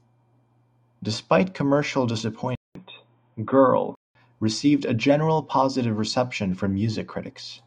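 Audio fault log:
2.55–4.15 s, input switched to a poorer device: the speech goes dull and boxy, with nothing above 3.8 kHz, after about 200 ms of silence at the switch. A faint new background hiss sits far below the speech, and loudness stays roughly unchanged. The narrow band and changed noise floor most likely come from capture moving to a lower-grade microphone or headset call profile. The dull sound begins just before "received a generally positive".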